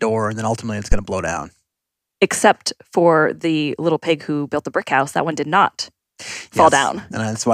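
At 0.92 s there's a phantom power thump running to about 1.00 s: supply voltage switched on or off on the live input, and that step kicked through the coupling capacitors. It's a deep, short thud peaking at about -2 dBFS, decaying in roughly 19 ms.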